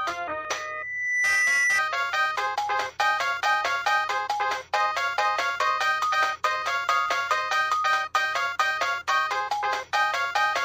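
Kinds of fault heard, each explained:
Loudspeaker feedback squeal: a single steady tone at 2 kHz appears at 0.50 s and swells over roughly 0.7 s into a piercing squeal that sits about 5 dB above the rest of the sound, then stops at 1.82 s. The cause is a microphone hearing the loudspeaker it drives. At 2 kHz the gain around that loop exceeded one, so the tone fed on itself and grew.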